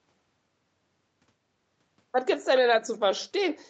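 No technical faults can be heard in this speech. It passed through a call's microphone processing and call path, and nothing reaches above 8 kHz, which fits a wideband call codec setting.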